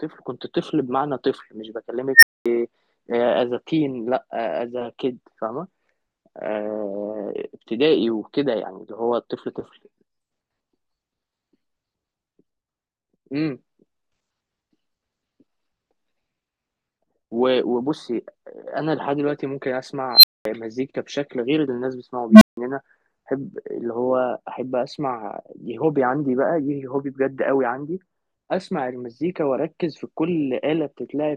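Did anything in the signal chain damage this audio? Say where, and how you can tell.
Yes. Three times a tone swells out of the speech, grows very loud and clips within roughly a tenth of a second, then drops to silence: at 2.14 to 2.46 s (around 2 kHz, then about 230 ms of silence), 20.13 to 20.45 s (around 4 kHz, 220 ms gap) and 22.30 to 22.57 s (a low hum near 200 Hz, 160 ms gap). This is an unstable filter in the processing stage. A recursive filter with bad coefficients feeds its output back with gain above one, so a tone grows until the numbers overflow and the filter resets, leaving the silence.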